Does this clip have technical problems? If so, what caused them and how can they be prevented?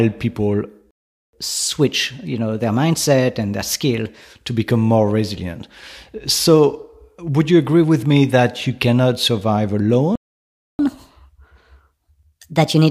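Yes. A playback stall occurs twice: the player most likely starved of buffered data or had its output thread blocked, so nothing reached the output until it recovered. The speech cuts off mid-flow at 0.91 s for 0.43 s, and again at 10.16 s for 0.64 s, then resumes. A deeper playback buffer and a high-priority audio thread that never waits on network or disk would prevent these gaps.

Catch-up at higher speed follows each stall, as the player resamples its backlog faster to regain the lost time. From 1.33 s to 4.33 s the speech runs at 1.1 times normal speed, with pitch raised by about a semitone and a half. From 10.79 s to the end of the clip it runs at 1.25 times speed, about four semitones sharp. Recovering lost time gradually, through a small rate change or time-stretching that keeps the pitch, would prevent this effect.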